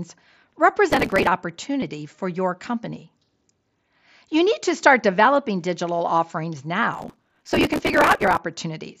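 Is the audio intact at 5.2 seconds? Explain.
Yes, the speech at 5.2 s is intact, with no fault at that moment in the sound carried over the Bluetooth mSBC headset codec.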